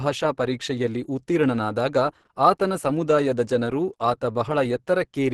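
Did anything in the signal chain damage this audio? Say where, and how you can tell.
Yes. The damage looks like it happened at the codec stage, likely Opus compression, across the whole speech clip. It sounds muffled and hoarse, and nothing reaches above 12 kHz. That fits a low bitrate around 16 kbps pushing the encoder into its hybrid speech mode, which trades band detail for a narrower bandwidth.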